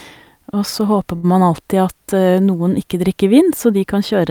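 From 1.15 to 1.34 s, a short stall from a late packet occurs. The receiver stretches the last sound about 77 ms, then resumes. Nothing is lost, but a sound is held too long, with a slight buzz or dip.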